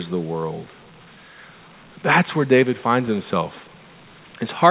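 Listening through this speech, which comes over a narrowband call line with nothing above 4 kHz, nothing stood out.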